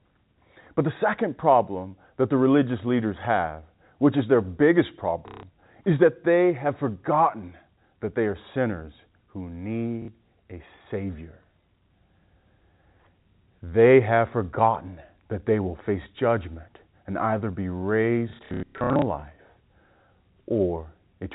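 At 5.28 s, for about 150 ms, and again at 10.02 s, for about 60 ms, packet loss with the last packet repeated makes the speech stutter robotically. The receiver replays the last good packet until new ones arrive. Each replay joins the next out of step with the pitch, giving a buzz near 33 Hz, which fits 30 ms packets. From 18.3 to 19.02 s, losses totalling 450 ms are scattered in runs of up to 90 ms. The waveform shows identical repeated blocks, and the spectrogram shows smeared, frozen harmonics, all within the 4 kHz telephone band of the G.711 coding.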